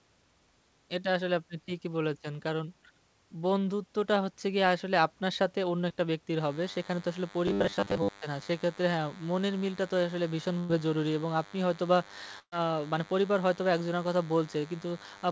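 At 5.89 to 5.91 s there is a short concealed packet loss: about 10 ms of audio never arrived, and the receiver covered the hole by extending the preceding sound before blending back in. It is a tiny smear or wobble, far briefer than the later dropouts, and the audio around it keeps its timing. Only a sliver of the sound goes missing, so nothing is held or faded.

From 6.4 s to the end, a DECT cordless phone buzz sits under everything. A nearby DECT handset or base station is radiating a burst every 10 ms, which the audio circuitry rectifies into a steady, thin 100 Hz buzz rich in harmonics, at about 20 dB below the speech. Unlike the robotic effect that follows, it does not come from the speech itself. It is a constant layer that never follows the speech and persists through pauses.

Between 7.48 and 8.12 s the speech turns into robotic sound from repeated short buffers. New audio was likely arriving too seldom, so the playout kept recycling 10 ms chunks, and roughly half of what is heard is repetition and real audio is skipped. 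This locks a rigid, metallic 100 Hz pitch onto the speech. It shares the DECT buzz's frequency, but here the speech itself is distorted and the rough shape of the speech still comes through.

Two bursts of packet loss follow, carried over the wideband G.722 call codec, which passes nothing above 8 kHz. At 10.59 to 10.70 s about 100 ms is lost, and the last sound is continued and faded before the audio resumes further on. At 12.39 to 12.53 s about 130 ms is lost, and the concealment decays to silence for its final 70 ms. The audio then jumps ahead, with a gap far longer than the earlier wobble.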